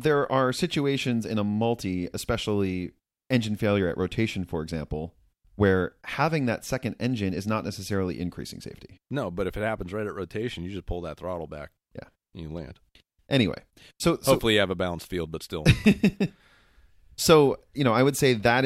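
A speech recording, and there is nothing technically wrong with it.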